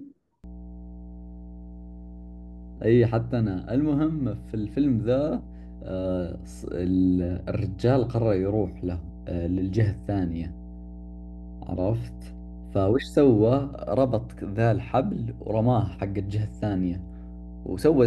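A steady low drone at 60 Hz enters at 0.44 s and runs under the speech to the end, sitting fairly close to it, roughly 15 dB below. This is mains hum: a ground loop or nearby transformer is leaking the power line into the signal.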